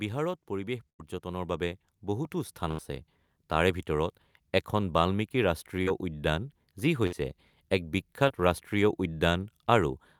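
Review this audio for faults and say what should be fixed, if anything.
Automatic gain rising from 0.47 to 2.92 s lifts sound and background together by about 8 dB, visible as a steadily growing waveform envelope. Fix the gain control's level target so it doesn't ramp up on quiet input.

Bursts of packet loss at 0.89–1.01 s, 2.71–2.80 s and 7.07–7.14 s drop about 100, 80 and 60 ms of audio. The receiver held and faded the last sound, which shows on a spectrogram as smeared, decaying bands before a jump. Add forward error correction or deeper jitter buffering to prevent this.

Short concealed packet loss at 5.82–5.89 s and 8.28–8.32 s patches gaps of about 40 and 20 ms, appearing as brief blurred spectral patches. Steadier network paths or redundancy would prevent it.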